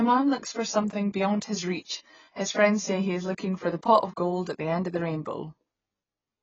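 Throughout, heavy AAC compression is likely the cause. Nothing sounds above 7.8 kHz, which fits a low bitrate near 19 kbps. The speech sounds dull and smeared.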